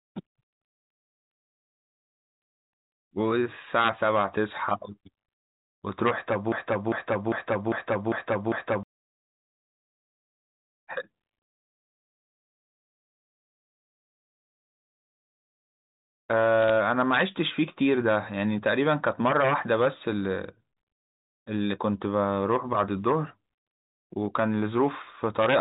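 A telephone-band speech recording, carried as G.711 mu-law, so nothing above 4 kHz comes through. From 6.52 to 8.83 s a broken-record loop takes over. A fragment of about 0.4 s plays six times, back to back and identical each time. The likely cause is a stalled player, encoder or stream resending the last piece it held. The speech that should have filled that span is lost. From 16.62 to 16.70 s there are bit errors on the digital phone line. A small fraction of bits were flipped, and each flip corrupts a single sample. Hits on the sign or high bits come through as sharp ticks, heard as a short burst of crackle over the speech.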